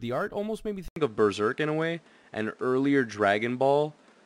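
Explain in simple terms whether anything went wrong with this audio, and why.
Something went wrong at about 0.88 s, just after "art almost made me". The sound drops out for a brief moment, about 80 milliseconds. It then comes back duller, as if the highest tones were cut off above roughly 11.1 kHz. The loudness shifts a little, and a faint new background hiss appears. This stays until the end. The likely cause is an input switched to a poorer device, such as a different microphone or headset.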